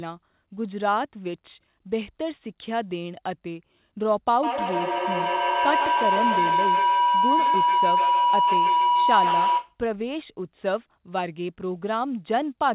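From 4.43 s to 9.8 s the speech is overtaken by a feedback howl: the loop between a microphone and a nearby loudspeaker on the same call adds gain each round trip, so the sound narrows to a tone around 1 kHz, with the loop repeating about every 150 ms and peaking about 4 dB above the speech. Unlike ordinary echo, whose repeats fade, these grow until the loop is broken. The tone sits within the call path's band, which ends at 4 kHz.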